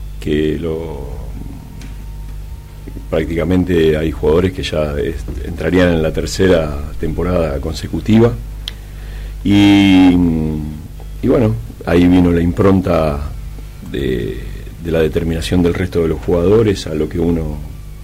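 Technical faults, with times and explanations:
Throughout: hard clipping. Driven about 9 dB past the stage's limit, around 2 percent of samples are sliced flat at the ceiling, adding crackle on loud peaks. The waveform shows flat-topped peaks, and the spectrogram shows brief vertical smears of high harmonics there.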